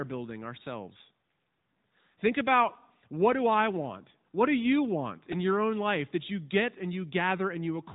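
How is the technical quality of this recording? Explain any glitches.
The recording has two problems: narrowband mobile-codec coloration throughout, and one brief glitch near the 5-second mark.

The AMR narrowband mobile codec affects the whole clip. Nothing above 3.8 kHz comes through, so the speech sounds boxed-in and telephone-like, lacking the crisp sibilants and air of wideband audio. AMR-NB rebuilds the voice from a vocal-tract model excited by a few pulses per 5 ms subframe. The damage is plainly audible as a buzzy, synthetic edge, which fits a mid-range mode of roughly 10 kbps.

A repeated buffer occurs at 5.32 s, between "do you want" and "your own life that". The playback device ran short of fresh audio and replayed its last buffer several times in a row. The very short repeat length fits a 64-sample buffer. Because each copy lasts only about a millisecond and joins hard to the next, you hear a brief click or buzz rather than a stutter. 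About 5 ms of real audio is lost.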